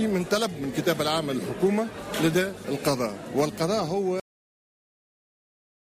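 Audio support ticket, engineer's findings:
Cut-off end at 4.20 s. Final buffers never written or played out; probable fault in capture/output stop handling, tail not flushed. Sound halts mid-event and drops straight to digital silence with no decay, silent through to end of clip.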